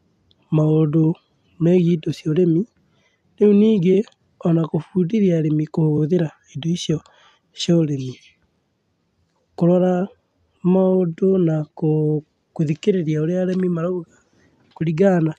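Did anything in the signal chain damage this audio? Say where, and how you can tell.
Yes, at the codec or storage stage: the speech has repeated frames. At 3.93 to 3.95 s and again at 5.97 to 5.99 s, a single block of about 23.2 ms plays twice, giving a brief stutter. Each repeat adds 23.2 ms to the running time. That block length fits a 1024-sample compressed frame at 44.1 kHz, so one encoded frame was written or sent twice and the decoder rendered it again.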